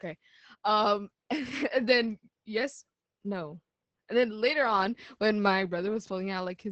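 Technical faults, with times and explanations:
Throughout: Opus voice compression. The speech is coded at about 10 kbps in Opus's SILK linear-prediction mode at wideband, which leaves nothing above about 8.7 kHz, and at this low rate the excitation is coded coarsely in 20 ms frames. Because the top of the spectrum is gone, the speech sounds muffled and dull. The coarse excitation coding makes the voice sound hoarse and slightly robotic, and the damage is heavy across the whole clip.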